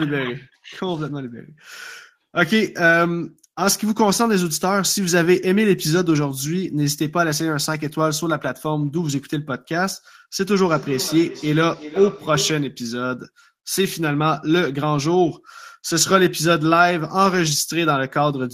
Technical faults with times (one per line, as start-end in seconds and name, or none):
10.33-12.78 feedback echo between two devices